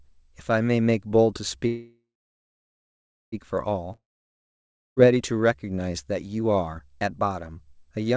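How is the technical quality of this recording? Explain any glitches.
The recording has three clear glitches, all typical of an internet call, and the band stops at 8 kHz, which fits a wideband call codec such as G.722 at 64 kbps.

From 1.67 to 3.35 s there is a call audio freeze. The last sound is stretched into a fading buzz or hiss, then about 1.3 s of silence, and the speech resumes where it stopped, with nothing skipped. The likely cause is packets held up in transit while the jitter buffer ran dry. The receiver filled roughly 1.65 s with synthetic sound and delayed everything after it by that amount.

From 3.92 to 4.99 s there is a long network dropout. It begins the same way, with a brief fading continuation and then about 0.95 s of silence. This time the speech comes back further along, so about 1.05 s of it is gone. The likely cause is audio that never arrived at all. The receiver masked the gap and then skipped ahead past the lost section rather than waiting for it.

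From 4.98 to 5.41 s, right as the sound returns, there is a jitter buffer slow-down. The speech plays at about 92% speed with the pitch unchanged, so sounds seem drawn out. To rebuild its reserve after the outage, the receiver repeated single pitch periods and fragments of pauses, adding about 42 ms over that stretch.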